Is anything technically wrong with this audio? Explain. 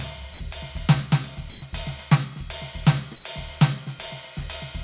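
Yes. The music gets swapped out for synthetic noise in three short spots, and the whole thing is band-limited with nothing above 4 kHz, which fits a narrowband call codec like G.711 A-law.

Sound dropped by the voice detector: from 0.34 to 0.40 s the music gives way to a flat hiss for about 60 ms, and roughly 40 ms of actual sound is gone. The sender's voice detector most likely judged that bit of music to be background and stopped transmitting, so the receiver filled the gap with comfort noise until sending resumed.

Comfort noise in place of the background: at 1.5 to 1.62 s and again at 3.16 to 3.24 s, the quiet background, about 21 dB and about 26 dB below the loud parts respectively, turns into a smooth, featureless noise. This is likely discontinuous transmission, where the sender pauses during apparent silence and the receiver synthesises a rough match. The level shifts too, up about 2 dB in the first spot and down about 3 dB in the second.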